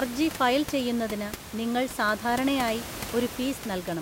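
No system faults are audible in this speech clip; the only background is the room's own noise, sitting about 12 dB below the speech and belonging to the recording itself.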